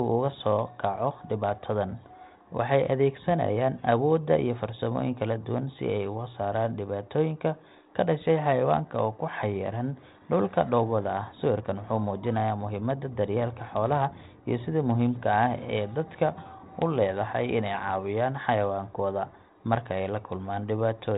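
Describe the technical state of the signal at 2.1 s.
At 2.1 s the speech is intact, with no dropout, glitch or distortion; it carries only the narrow telephone band and faint level-following hiss of 32 kbit/s G.726 ADPCM coding.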